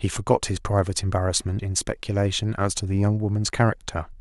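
At 1.58 s the speech lurches forward, as if a sliver of sound had been snipped out and the two sides pressed together. Roughly 70 ms of audio goes missing there. These are compressed frames skipped: whole frames of the encoded stream were never played, either absent from the file or rejected by the decoder as corrupt.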